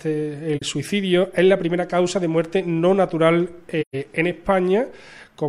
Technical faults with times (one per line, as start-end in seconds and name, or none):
0.57-0.62 AAC frame loss with muting
3.81-3.95 AAC frame loss with muting